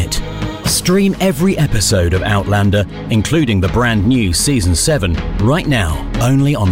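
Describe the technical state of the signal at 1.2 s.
At 1.2 s the signal is intact, with no dropout, distortion, glitch or other audible fault at that point.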